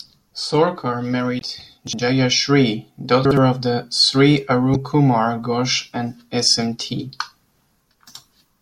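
At 1.38 to 1.42 s a short glitch cuts through the speech. This is damaged data in a compressed stream: corrupted bytes make the decoder misread the frames there and lose sync until it finds the next valid frame header. On a spectrogram it appears as a 40 ms blocky, broadband smear unrelated to the surrounding formants. The waveform shows an abrupt disturbance with hard edges.

From 1.87 to 1.99 s the speech jumbles briefly. These are chunks out of order: a 60 ms chunk plays one chunk late, so two neighbouring 60 ms pieces swap places. Nothing is lost, but three hard joins appear. On a spectrogram these show as thin vertical lines where formant tracks break and jump back. The waveform has sudden steps at each join. The same fault recurs at 3.25 to 3.37 s, again with 60 ms chunks one chunk late.

A second glitch from damaged data in a compressed stream occurs at 4.72 to 4.76 s. It again lasts 40 ms, shows as a broadband blocky patch on the spectrogram, and appears as an abrupt, hard-edged disturbance in the waveform.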